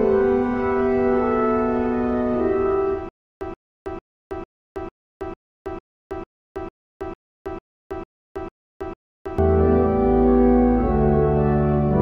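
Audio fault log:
3.09–9.38 s, stutter with silent gaps: a short burst of about 129 ms of the same sound repeats 14 times, each followed by about 321 ms of silence, so the fragment returns at an even pace of one every 450 ms. This likely comes from a player or stream that stalled and, at each retry, played its last fragment again before running empty. The audio that should have filled this span is lost.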